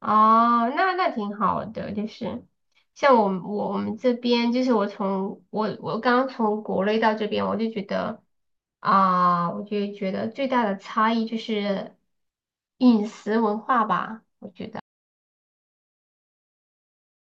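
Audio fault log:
14.8 s to the end: audio dropout to silence. The speech cuts off mid-flow and never returns. What follows is silence with no room tone or hiss, so anything said after that point is lost. The likely cause is an input that dropped out, through a disconnected device, a broken link or an accidental mute, while recording carried on writing silence. On the waveform the trace collapses to a flat line, and the spectrogram goes fully blank.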